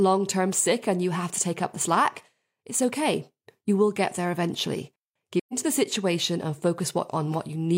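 At 5.39 s, after "will get there eventually", the speech fades into a soft silence and returns at 5.54 s before "the situation and". This is AAC frame loss with muting. The decoder zeroed the missing spectrum, a gap fitting three lost frames, and overlapping windows softened both edges.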